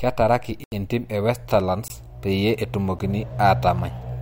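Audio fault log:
0.64–0.72 s, 1.88–1.90 s, 2.99 s: block of digital silence. An 80 ms hole, a shorter 20 ms gap, then a brief tick, each from samples abruptly replaced by zeros with no fade.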